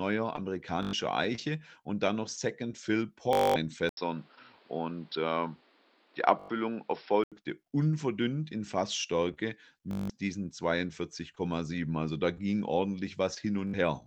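Bluetooth stutter at 0.83 s, lasting about 0.10 s, and again at 3.33 s for about 0.22 s. Audio packets arrived late or not at all, so the receiver kept replaying its last short slice, producing a rapid machine-gun buzz before the speech resumes further along.

At 3.89 s, after an 80 ms silence and just before "unverdünnt in", the speech turns dull and boxy: nothing remains above 5.5 kHz, a new noise floor sits roughly 35 dB below the signal, and loudness stays about the same. This is likely an input switched to a poorer device. Full bandwidth returns at 7.32 s.

Within that stretch, a Bluetooth stutter at 6.39 s lasts about 0.10 s. Two more follow: at 9.91 s for about 0.18 s, and at 13.68 s for about 60 ms, each the same replayed-buffer buzz.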